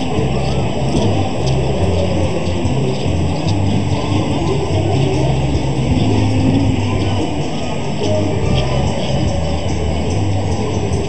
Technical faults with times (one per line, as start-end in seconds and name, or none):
0.00-11.09 channel delay (comb filtering)